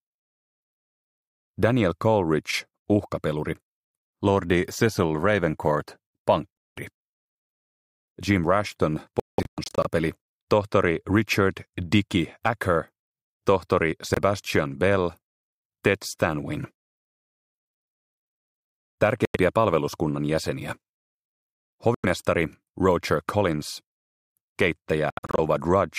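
Silent gaps occur at 6.59 s (186 ms), 9.20 to 9.87 s (scattered), 14.14 s (23 ms), 19.25 and 21.95 s (93 ms each), and 25.10 to 25.39 s (scattered). These are likely Bluetooth dropouts. Late packets were discarded. Sound resumes further on, as if it had played on.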